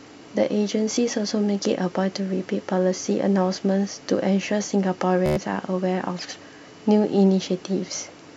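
Bluetooth stutter at 0.96 s, then 5.26 to 5.37 s: lost packets force replays of the last slice, a blip, then a buzzing stutter before speech jumps ahead.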